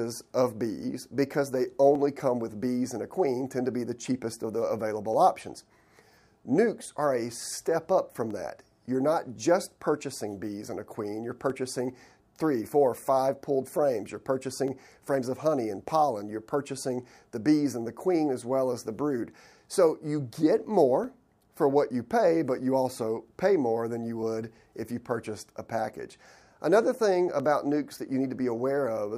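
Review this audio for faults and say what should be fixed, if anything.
Clock drift buffer slips, from 1.95 s to 27.4 s: a click recurs every 3.18 s, about ten in all, while there is signal. The steady spacing likely comes from two devices running on separate clocks that disagree by roughly 100 parts per million, so the buffer between them gradually drifts until a small block of samples, around fifteen, is dropped or repeated to catch up. To prevent it, lock both devices to a single shared word clock, or resample adaptively between independent clock domains.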